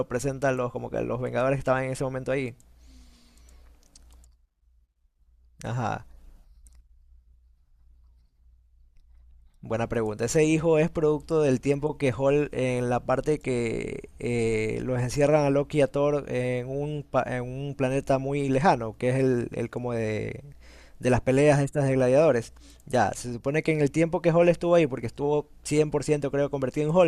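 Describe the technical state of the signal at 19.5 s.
At 19.53 s there's a block of digital silence, only about 0.25 ms long. A tiny run of samples drops straight to zero and comes back with no fade, likely from an output buffer not filled in time, so it's heard as a sharp tick in the speech.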